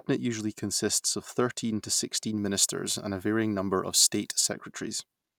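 Pre-emphasis left on, from 2.37 s to 4.52 s of this speech: the treble was lifted before recording or transmission following the CD 50/15 µs curve, and the complementary de-emphasis was never applied on playback. High frequencies therefore stay exaggerated, about 8 dB stronger at 10 kHz relative to 1 kHz, so for those two seconds the speech turns thin and overly bright, with sibilants standing out sharply.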